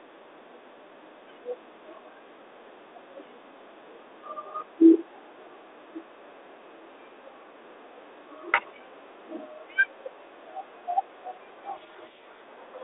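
From 11.74 to 12.41 s a codec payload misread occurs: the receiver unpacks the G.726 code words with their bits in the wrong order, so the decoder rebuilds wrong prediction differences, and the speech within the 300 Hz to 3.7 kHz telephone band is buried in harsh distortion.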